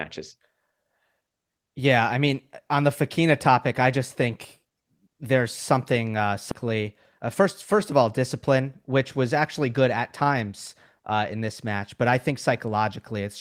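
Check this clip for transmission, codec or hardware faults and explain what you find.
One transmission fault turns up in the speech: a skip ahead at 6.51 to 6.53 s. The talk lurches forward with no pause, as though roughly seven-tenths of a second of speech had been snipped out and the two ends spliced together, leaving a clipped, abrupt join. A stretch of audio was thrown away while later audio was already waiting, either lost in transit or dropped by an overflowing jitter buffer, so playback resumed from later material with nothing filled in.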